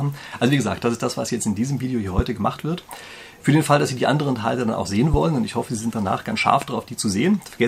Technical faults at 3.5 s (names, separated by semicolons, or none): none